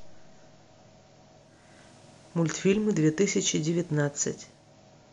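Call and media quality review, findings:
Digital radio blending to analogue, 1.36–4.77 s. Receiver lost digital and cross-faded to the FM simulcast over 438 ms, returning at 4.77 s. Faint hiss rises, roughly 35 dB below the speech; level shifts about 2 dB. Spectrogram: broadband noise floor lifts across the span, with soft fade edges. Waveform: slight step in envelope at each blend. Probable component: hybrid tuner blend logic.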